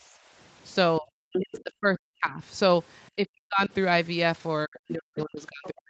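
From 0.00 to 0.31 s the room background is pulled down by about 11 dB and then returns: background gated by the echo canceller. The ambient floor dips. That separates it from the cuts that follow, which bite into the talker.

At 0.99 to 1.09 s, 1.29 to 2.41 s, 3.16 to 3.71 s and 4.65 s to the end, the voice itself sinks, by roughly 25 dB in the first brief dip and around 40 dB in the longer ones. The likely cause is speech suppressed in double talk, with the canceller mistaking the talker for loudspeaker echo. Unlike gating, it eats words, not just room tone.

Short scraps of a second voice surface at 1.57, 4.76 and 5.64 s, each lasting about 40 to 50 ms and sitting about 20 to 25 dB under the main talker. These are likely the other side's voice leaking through as residual echo. They add sound on top of the talker rather than removing it, and the whole call is band-limited at 8 kHz.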